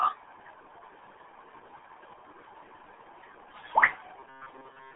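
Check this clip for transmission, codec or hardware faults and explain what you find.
The whole clip carries the RealAudio 14.4 codec. It squeezes the speech into a telephone-like band of roughly 300 Hz to 3.5 kHz, with nothing above 3.8 kHz, and coarse coding at what sounds like 8 kbit/s leaves it heavily muffled and gargly throughout.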